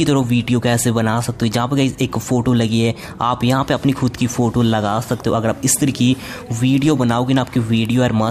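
Listening closely, nothing in the audio stood out as a technical problem at any point.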